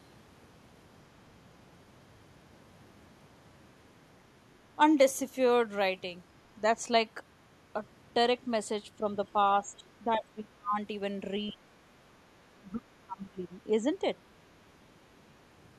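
It's a speech recording, and it shows two related echo-canceller problems. First, there's speech suppressed in double talk: the talker's level gets pulled down in chunks between 9.0 and 10.78 s (roughly a second of it affected, dipping by about 20 dB at worst), again briefly from 11.52 to 11.69 s (a shallow dip of about 10 dB), and hardest between 12.33 and 13.87 s, where it drops by about 30 dB. That's likely the canceller seeing both sides active at once, failing to tell the near talker from loudspeaker echo, and ducking everything. Second, you can catch the other side's voice leaking through in two faint scraps, at 9.26 to 9.32 s and 11.47 to 11.53 s, sitting about 35 and 30 dB below the speech respectively. Those short fragments are most probably residual echo from the far end that the canceller didn't fully strip out, right as it was struggling with the overlap.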